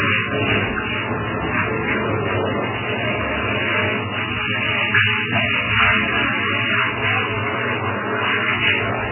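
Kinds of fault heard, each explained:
MP3 compression: The audio has nothing above 3 kHz for its whole length, so it sounds dull and boxed-in, with a heavy watery, swirling texture and smeared attacks as faint spectral detail flickers in and out from frame to frame. This points to an MP3 encoder starved of bits, likely running at a very low rate near 8 kbps, where it cuts off the treble and drops weak frequency lines to fit its budget.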